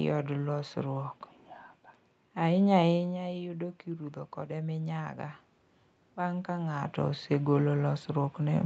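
Around 3 s the talker seems to drift back from the mic, and the level drops by about 9 dB. From 3.06 to 5.46 s you can hear the automatic gain rising as it slowly pushes its gain up by about 4 dB to compensate. Because it can't tell voice from room, the background noise swells right along with the speech over those two-odd seconds. It only partly catches up, so the speech stays quieter than before the drop.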